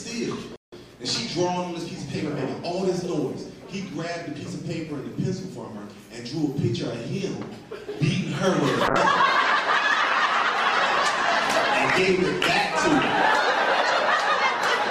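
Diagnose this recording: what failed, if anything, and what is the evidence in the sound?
At 0.56 s the sound stops dead for about 160 ms and resumes at 0.73 s. This is a playback stall at the buffer or player stage, likely caused by the output running dry or its thread being blocked. The gap is silent, so it does not sound like a network dropout, where concealment usually smears or repeats audio.

From 8.88 s to the end of the recording, the sound turns coarse and dull, and the upper band thins out. This is a call bitrate drop in the codec stage. The bandwidth estimate fell, the encoder was given far fewer bits, and it quantised more roughly and cut the high frequencies. The change fits a fall from around 64 kbps to around 13 kbps. Unlike a single stall or glitch, the audio never goes silent but keeps a steady, muffled, watery texture that lasts to the end.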